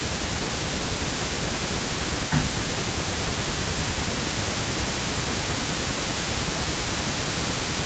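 From the start to 5.8 s, and again from 5.98 s to the end, an echo leak trails the speech by 217 ms at about 15 dB down. This is likely loudspeaker pickup the echo canceller failed to remove. Unlike room reverb, it is a distinct delayed repeat rather than a smooth tail.

Speech suppressed in double talk pulls the level down by about 15 dB at 0.34–0.76 s, 1.02–3.98 s and from 5.72 s onward, and by about 20 dB at 4.47–5.38 s. The likely cause is the canceller turning down the near talker along with the echo.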